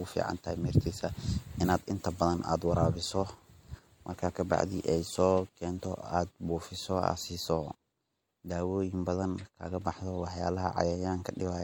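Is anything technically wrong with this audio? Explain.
Yes. Throughout the speech there is plainly audible MP3 compression damage, likely from encoding at a low bitrate, which fits about 64 kbps. The encoder spends its limited bits only where its hearing model predicts they matter and drops weaker frequency lines, which flicker on and off between frames. That leaves a watery, swirling texture and smeared attacks. Unlike broadband noise reduction, the damage comes from that frame-by-frame flicker. The treble still extends to 20.8 kHz, so this is not a plain low-pass loss.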